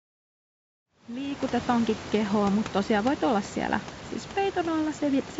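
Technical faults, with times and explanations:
No technical faults detected.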